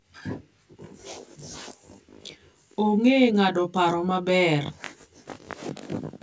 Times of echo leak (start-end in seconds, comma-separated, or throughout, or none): none